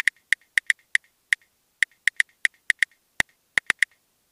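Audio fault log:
3.2–3.93 s, loose connector crackle: for roughly three quarters of a second near the end, the sound breaks into an irregular burst of scratchy crackle. A worn or dirty contact somewhere in the signal path is shifting and repeatedly making and losing connection, so the audio is chopped on and off at random, uneven intervals. Each abrupt interruption produces a small click, and the clustered clicks form the rough, scratching texture.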